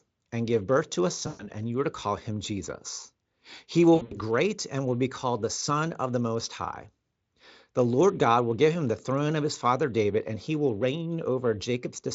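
At 1.27–1.46 s, between "give birth to a" and "and you are to", VoIP packet loss concealed by the speech codec leaves a stretched, fading buzzy tone or coloured noise: the Speex decoder extrapolates its last pitch and filter across 120 ms of lost audio. At 3.95–4.17 s, before "and will be called", 140 ms of losses scattered over 160 ms, with runs up to 80 ms, cause the same smeared, weakening sound.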